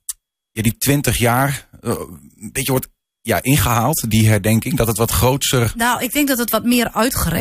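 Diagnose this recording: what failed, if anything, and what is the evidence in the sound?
Nothing failed here that I can hear; the speech runs along without a single event at any stage of the chain that would need diagnosing.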